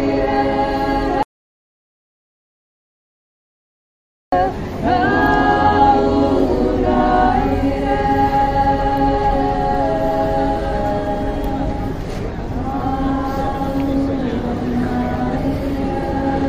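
An audio dropout to silence runs from 1.23 s to 4.32 s: the sound stops abruptly mid-flow and, for about 3.1 s, the signal is silent, with not even room tone underneath, before the audio resumes just as suddenly. The cause is likely a lost input, such as a disconnected device, a failed link or a momentary mute, while the recorder kept writing silence. Whatever was happening in those three seconds is gone from the recording.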